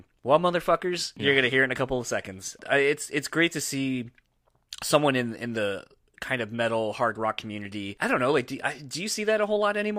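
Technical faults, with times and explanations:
No technical faults can be heard in this speech recording. There is nothing to list with a time or an explanation.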